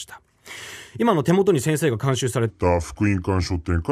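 Speech, with a section at the wrong speed from 2.50 s to the end: playback drops to 0.77 times normal, so the sound turns slow and about five semitones deeper, likely from a clock mismatch. A spectrogram shows harmonics and formants stepping downward, and the waveform stretches out.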